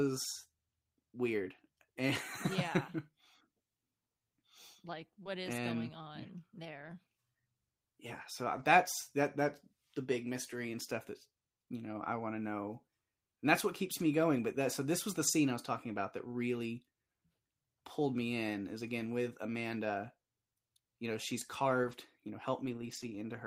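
At 5.23 s the speech has a short concealed packet loss. About 20 ms of audio did not arrive in time, and the receiver covered roughly 18 ms of it by extending the preceding sound, following its pitch where voiced or substituting shaped noise where not, then crossfading back into the real signal at 5.27 s. It comes across as a brief smear or wobble.

Overlapping the end of that gap, at 5.25 s, is the first lost packet rebuilt from error correction. About 20 ms is played from the low-bitrate redundant copy carried in the following packet, so there is no dropout, only a rougher, noisier patch. The same happens at 8.55 to 8.65 s (about 60 ms rebuilt), 13.99 s and 15.27 s (about 20 ms each), 21.83 to 21.93 s (about 60 ms), and 22.65 to 23.15 s, where about 260 ms is rebuilt. The longer stretches point to several separate packets being recovered this way.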